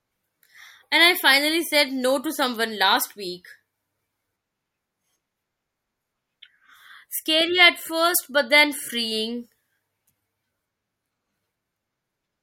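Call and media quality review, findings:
No audible faults found in this speech recording.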